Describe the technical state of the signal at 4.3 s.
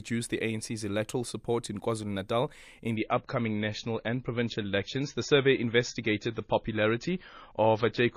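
At 4.3 s you're in an adaptive stream at a lower bitrate, running from 2.96 s to the end. The connection slowed, so the player switched abruptly, without a gap, to a thinner-sounding encode, probably 24 kbit/s MP3. Nothing above 7.1 kHz remains, and the speech sounds dull and smeary.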